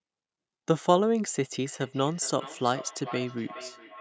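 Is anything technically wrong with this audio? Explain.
Yes. From 1.65 s to the end of the clip, there is feedback echo between two devices. The speech returns as a delayed copy roughly every 400 ms. At its loudest the echo sits about 15 dB below the direct speech. Two devices in the same room are likely on one call. One plays back what the other's microphone sent, and that microphone picks it up again. Each device's echo canceller only removes its own playback, so this loop goes unchecked. The repeats sound thinner and more ringing than the original.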